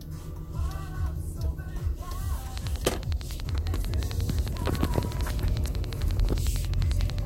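A train of clicks runs from 2.58 s to 7.19 s: about fifty near-identical pulses at a steady 11.1 per second, peaking roughly 15 dB above the sound beneath. It is likely electrical interference or a faulty connection, and it is heard as a rapid, even ticking.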